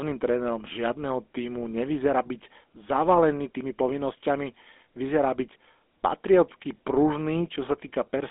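Speech throughout is marked by GSM full-rate codec damage: a buzzy, gravelly roughness from pulse-driven vocal-tract coding that fits a 13 kbps stream. The spectrogram shows energy confined to roughly 250 Hz–3.5 kHz, with nothing above 3.8 kHz.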